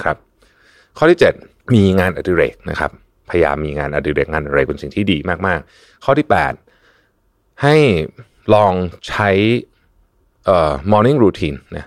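No technical faults occur at any point in the recording, so there are none to describe in time order.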